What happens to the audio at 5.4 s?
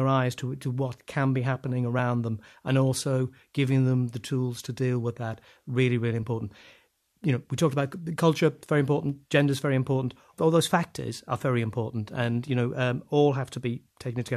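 Nothing goes wrong at 5.4 s; the speech runs through that moment intact, with no dropout, click, glitch or other fault.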